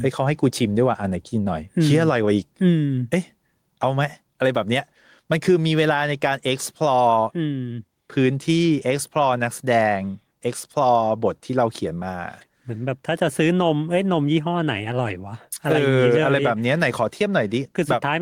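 Speech with gain pumping throughout, the gain swinging around 10 dB, likely from gain set far too high and a fast limiter clamping it. The waveform looks squashed.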